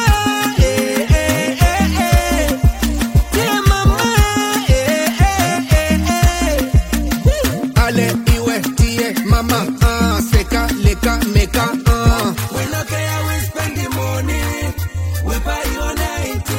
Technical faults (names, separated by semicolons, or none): none